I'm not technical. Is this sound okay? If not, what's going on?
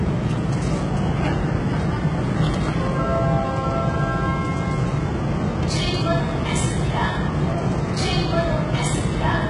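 No, not quite. The whole clip has the sound of heavy HE-AAC compression, likely from being squeezed hard to save space. That kind of compression keeps only the lower part of the sound properly and fakes the top end by copying lower parts upward, so the treble sounds gritty and metallic from start to finish. Nothing at all comes through above about 11 kHz, so the very top is simply gone.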